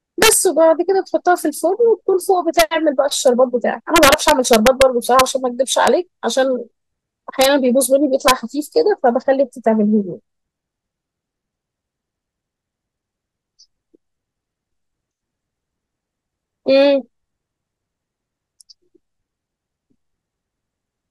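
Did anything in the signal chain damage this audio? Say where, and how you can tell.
Yes. Integer overflow damaged this speech, at a fixed-point gain or sample-format conversion stage. Harsh cracks occur at 0.23–0.33, 2.60–2.62, 3.96–4.82, 5.19, 5.87, 7.41–7.46 and 8.28–8.31 s. Peaks up to about 2 dB over full scale wrapped to the opposite sign instead of clipping.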